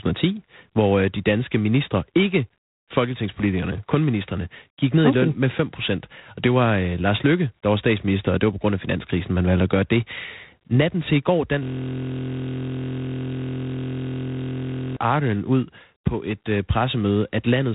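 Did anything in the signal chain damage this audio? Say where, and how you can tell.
Yes, in two places: the codec and the driver buffer.

The G.726 ADPCM codec damages the whole speech clip. Nothing passes above 3.8 kHz, so the top end is gone. A harsh, rasping hiss rides on the speech and rises and falls with its level. That is quantisation noise from coding each sample as a few bits of prediction error. The roughness is plainly audible and fits the 24 kbit/s mode, which is coarser than the usual 32 kbit/s.

A system hang loop sits at the driver or buffer stage, from 11.63 to 14.97 s. The system froze, but the audio hardware kept replaying the same ring buffer. One 23.22 ms slice repeats exactly, many times over. Because the slice is so short, it comes through as a steady buzz at 43.1 Hz, not a stutter. That length fits a 1024-sample buffer.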